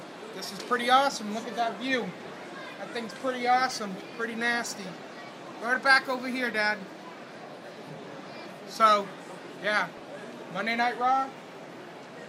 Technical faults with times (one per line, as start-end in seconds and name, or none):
5.75-5.85 DAB burbling